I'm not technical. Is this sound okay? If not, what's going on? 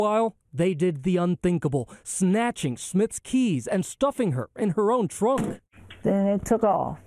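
Yes, nothing wrong can be heard anywhere in this sound.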